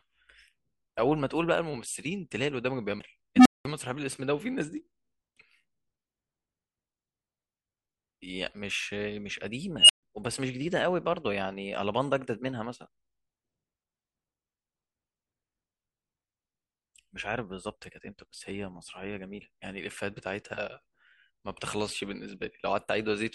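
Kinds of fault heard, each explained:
CD skip: the laser jumped to another turn of the disc's spiral, so at 2.99 s the speech drops out in a brief tick-like mute of around 10 ms and resumes from a different point. Unlike a dropout, the audio continues displaced rather than simply missing a gap.
Unstable filter: a recursive filter ran away on bad coefficients, so a tone swells to clipping, overflows and cuts out. At 3.36 s a low tone near 300 Hz builds for 97 ms then falls silent for 197 ms; at 9.79 s a squeal near 3 kHz builds for 100 ms, then 136 ms of silence. Unlike feedback howl, it ends abruptly in silence.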